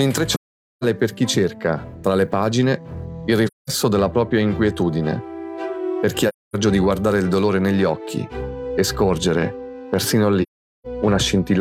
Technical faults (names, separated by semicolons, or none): AAC frame loss with muting